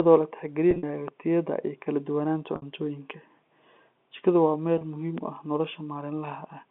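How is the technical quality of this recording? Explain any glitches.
The recording has two kinds of glitch, packet loss and pops, heard over a telephone-band G.711 line that cuts everything above about 3.5 kHz.

Packet loss with pitch repetition occurs at 0.71–0.83 s (80 ms lost in gaps spread over 120 ms, longest 50 ms), 2.56–2.62 s (60 ms) and 4.78–4.81 s (30 ms) before "muhiim u ah". The receiver loops the last pitch period to fill each gap, so short gaps sound briefly held and buzzy, while longer ones fade toward silence before the speech returns.

A loud pop is heard at 1.08–1.10 s, just before "tayada iyo kala", and another at 5.18–5.20 s, before "u ah". Each is a single sharp click peaking a few dB above the speech, likely from a voltage spike such as a switch or static discharge entering the chain.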